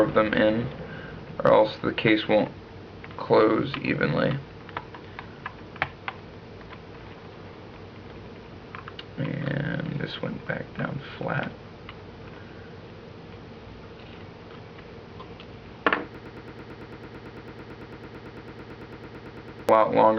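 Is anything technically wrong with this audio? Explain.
Yes, there's a broken-record loop from 16.15 to 19.69 s. A 111 ms fragment repeats back to back 32 times, giving a rapid stutter in place of whatever should have played there. The likely cause is the player, encoder or stream stalling and resending its last fragment.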